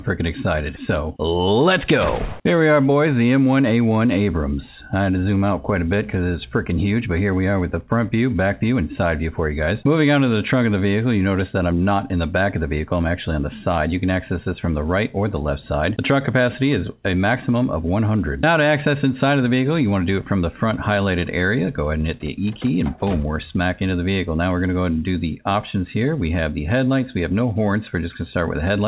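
Nothing goes wrong anywhere in the audio; it simply carries the narrow, telephone-like sound of a G.711 mu-law call at 64 kbps, with nothing above 4 kHz.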